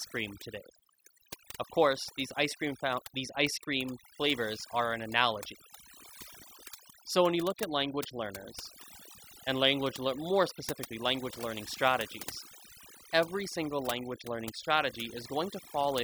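A speech recording that's been pushed through noise reduction set far too hard, and it shows from start to finish. Overdone noise removal like this clamps individual frequency bands down whenever they sit close to what the processor thinks is noise, so the background collapses into an eerie near-silence sprinkled with little chirpy, twinkling artefacts. The softer parts of the voice get caught in the same net.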